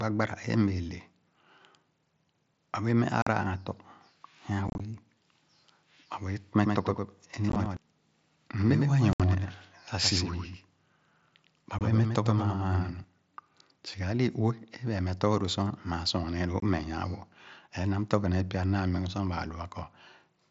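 At 3.22 s the speech drops out for 45 ms with hard edges, and at 4.68 s a rougher, chopped patch of short holes spreads over 120 ms. This is unconcealed Bluetooth headset packet loss: lost headset voice packets were replaced with silence rather than patched over. The gaps fall in steps of 7.5 ms, which fits mSBC packets on the link.

From 6.64 s to 13.04 s a second, full-band copy of the speech trails about 100 ms behind, roughly 5 dB quieter, with no room colour and abrupt start and stop. This doubled audio track is likely the same signal captured again through a slower path and mixed in.

Inside that stretch the dropouts return. At 7.50 s there are scattered holes over 60 ms, and at 9.13 s a solid 67.5 ms silence. At 11.79 s there is a brief 22.5 ms gap. A final 22.5 ms hole lands at 16.6 s.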